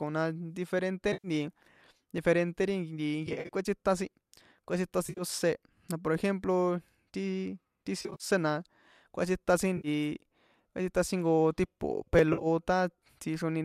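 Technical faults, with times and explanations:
1.13–1.28, 3.27–3.49, 5.07–5.23, 8.00–8.24, 9.77–9.88, 12.33–12.47 s, AAC frame loss with concealment: each patch sounds smeared and noisy or phasey. The decoder rebuilds the missing stretch from the last good spectrum. The gaps add up to 70–150 ms each, and the steps fit 10 ms frames, likely from the low-delay AAC stream. At 3.27, 5.07, 8.00 and 12.33 s the losses are scattered, with runs of about 40–70 ms. The one at 5.07 s falls between "kꞌuétsita sin kꞌuétsitan" and "ósé na por ejemplo". Unlike a repeat there is no exact copy or hard join, only blur.
2.18 and 12.19 s, repeated buffer: a single sharp click or tiny buzz, heard the second time just after "kꞌuétsitan jnko tipo". New audio arrived late, so the last block of about 5.3 ms, consistent with a 256-sample buffer at 48 kHz, was played once more. It was an exact copy butted against itself with a hard edge. 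That differs from the frame losses: nothing is smeared or rebuilt, there is only a brief discontinuity.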